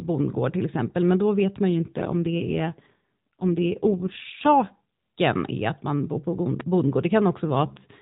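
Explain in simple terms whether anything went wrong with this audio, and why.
From 1.70 to 4.78 s, right after "men då vet man", and again from 7.51 s to the end, after "man bor på bondgård", the speech turns rougher and more synthetic. This is an AMR rate drop: a weak mobile link made the phone codec squeeze the voice into fewer bits.

At 6.60 to 6.63 s, just after "att man bor på", a single sharp loud pop jumps out well above the speech, which carries on underneath. It was most likely caused by a sudden jolt of voltage, such as from a plug, switch or static.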